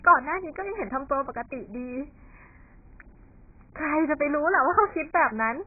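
From start to end the speech has nothing above 2.5 kHz and sounds dull, smeared and warbling, with fizzy sibilants. That is heavy AAC compression, likely AAC-LC at a bitrate around 12 kbps. Unlike a plain low-pass filter, the remaining band shimmers with coding artefacts.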